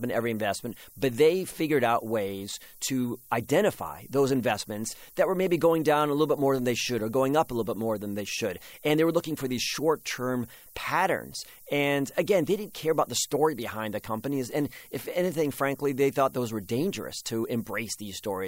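A steady, thin hiss sits under the speech for its whole length, brightest at the very top of the band and only about 20 dB below the voice. This is low bit depth with noise shaping: the audio is held to very few levels, which fits 8 bits, and the rounding error from each sample is fed back so the noise is pushed upward in frequency rather than spread evenly.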